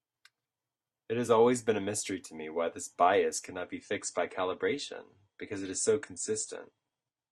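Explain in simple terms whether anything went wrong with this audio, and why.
An adaptive stream dropping to a lower bitrate happens at 3.47 s, right after "me why this bias", and lasts to the end. The connection slowed, so the player switched to a smaller, rougher version of the speech with no gap. Everything above about 9.7 kHz vanishes, dulling the sound.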